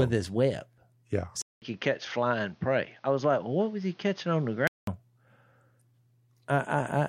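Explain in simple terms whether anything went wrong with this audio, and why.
Input switched to a poorer device, from 1.42 s to 4.87 s. The speech suddenly goes dull and boxy, with a short gap of about 0.2 s at the switch, and a faint new hiss underneath, though the loudness stays about the same. The likely cause is the recording jumping to a lower-quality microphone or headset that can't pass the bright, crisp part of the sound, so nothing above 6.6 kHz gets through. At 4.87 s the clearer sound returns.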